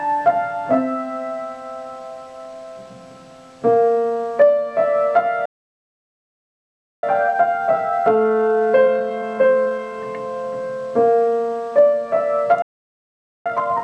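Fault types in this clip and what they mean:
Playback stall: the sound cuts out mid-flow for about 1.6 s at 5.45 s and 0.83 s at 12.62 s, likely the player starving for data.
Time-compressed catch-up: after each gap the audio rushes at normal pitch, 1.1x for three seconds, then 2x to the end.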